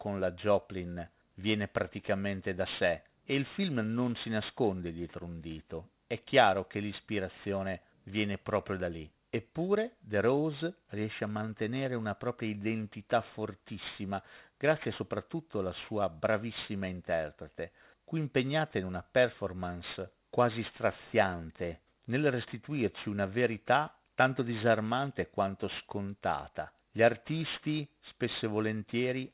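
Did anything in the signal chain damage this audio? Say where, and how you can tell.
Yes. Aliasing throughout, at sample-rate conversion: the speech seems to have been dropped to 8 kHz with no anti-alias filter, so content above 4 kHz folds back as gritty, metallic sibilance, roughly 20 dB below the voice. A spectrogram shows energy pressed hard against 4 kHz with mirrored, inharmonic streaks.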